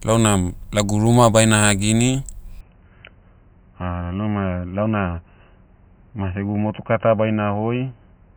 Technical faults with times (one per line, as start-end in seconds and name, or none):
2.61-8.36 input switched to a poorer device